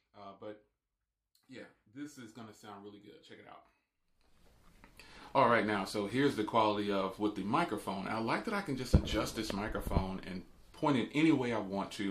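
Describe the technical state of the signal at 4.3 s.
At 4.3 s the signal is intact, with no audible fault at that point.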